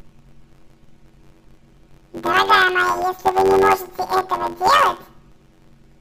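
From start to finish, the speech suffers from planar audio read as interleaved. Each 10.88 ms block stores all left samples then all right, but is read as alternating pairs. With blocks this short, the result is a robotic buzz at about 92 Hz, with no clear octave shift.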